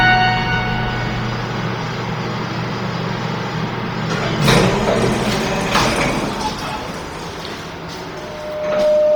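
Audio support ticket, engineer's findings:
Throughout: breathy, grainy fizz on everything up high, heavy codec smear, content still reaching about 20.2 kHz. Likely Bluetooth LC3 compression around 32 kbps with 10 ms frames, upper spectrum zeroed then noise-filled, hence the grain.

8.11 s to the end: loudspeaker feedback squeal, steady 607 Hz tone swelling over roughly 0.7 s, ending about 5 dB above the audio. Mic hearing its own speaker, loop gain past unity at that frequency.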